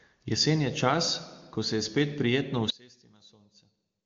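One channel inverted, from 2.70 s to the end at 4.05 s, just after "spet prijetno": the speech falls by about 25 dB to a faint copy. The likely cause is one stereo channel with reversed polarity, so the centred voice common to both channels cancels when they are summed to mono, leaving only their faint difference. Nothing is heard above about 7.3 kHz, which fits a wideband HD Voice phone codec.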